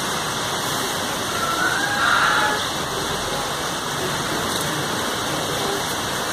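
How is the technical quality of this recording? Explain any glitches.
No technical glitches can be heard anywhere in the recording. There is nothing in the audio that calls for an explanation.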